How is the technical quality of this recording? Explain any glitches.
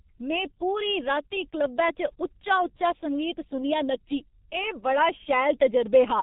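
Pretty rough, honestly. From start to finish the speech runs through a G.723.1 codec, heavily damaged: nothing above 4 kHz, slow 30 ms voice-model updates, so it's muffled and hoarse with smeared consonants, consistent with roughly 6 kbit/s.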